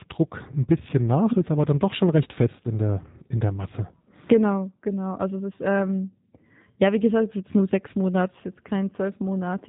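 Throughout, the speech passes through the G.729 codec at a rate that fits 8 kbit/s, rebuilt from a filter model, pitch prediction and sparse pulses. Nothing above about 3.8 kHz survives, so it sounds muffled, plainly rough and somewhat synthetic.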